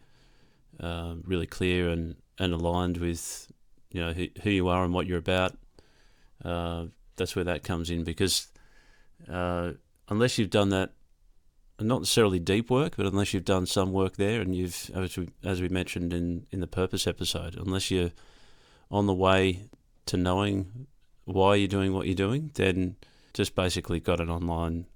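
No technical faults can be heard at any point in the recording.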